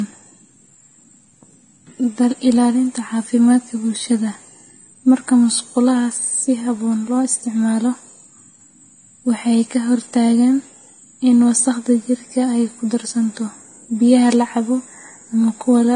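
From start to finish the speech carries the stacked artefacts of transcoding between lossy codecs. Highs are dull, and the different codec artefacts are heard together. On a spectrogram, energy stops flat at about 9.7 kHz. This is likely a low-rate Vorbis encode, around 29 kbit/s, re-encoded to AAC-LC near 32 kbit/s. The second codec spent its bits preserving the first one's damage.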